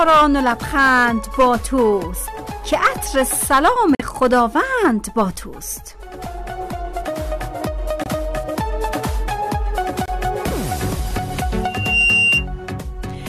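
At 3.95 to 4.02 s the sound drops out abruptly for about 66 ms. That's a corrupt frame muted: damaged compressed data was rejected by the decoder and the player filled the gap with silence, which points to two frames lost. At 5.56 to 5.58 s there's a quiet glitch of about -35 dBFS. That's a corrupt frame decoded, where a damaged frame got played anyway and put energy at the wrong frequencies for roughly one frame length. Two more muted-frame holes follow, at 8.04 to 8.08 s and 10.06 to 10.10 s, each about 40 ms of sudden silence with the timing kept intact. From 11.63 to 12.46 s a loudspeaker feedback squeal takes over: a 2.8 kHz tone swells over roughly 0.4 s to sit a few dB above the sound itself. The microphone is picking up its own speaker, and the loop gain at that frequency has gone past one.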